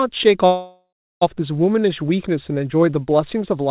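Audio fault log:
0.46 to 1.23 s, call audio freeze. The speech stops moving forward for about 0.75 s. The last sound is stretched into a fading buzz, and about 0.35 s of that stretch is silence. The likely cause is packets held up in transit, so the jitter buffer ran dry and the receiver filled the wait. When the speech resumes it picks up where it stopped. Nothing is lost, but everything after arrives about 0.75 s later.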